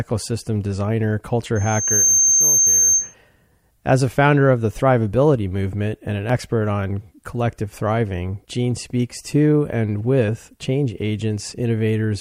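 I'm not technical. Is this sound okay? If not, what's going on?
No. From 1.55 to 3.14 s a high, piercing whistle around 6.3 kHz swells up over about half a second until it is louder than the speech. This is loudspeaker feedback squeal: a microphone picked up its own loudspeaker, and that one pitch looped round and kept growing.

There are also two tiny clicks or skips, at 2.32 s and from 6.30 to 6.32 s, where a sliver of speech goes missing. This is overlap between stream segments: the audio arrived in chunks, seemingly about 4 seconds long, whose edges overlapped, and the player trimmed away real sound where they met.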